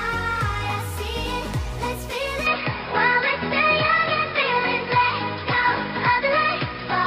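Right at 2.47 s the sound changes character and stays that way to the end: the top end vanishes, with nothing above about 5.2 kHz, so everything goes duller and a bit boxy. The level shifts by a few dB, and a new, different background hiss sits well under the signal. There's no gap at the change. That's most likely the input switched to a poorer device mid-recording, a narrower-band mic with its own tone and noise.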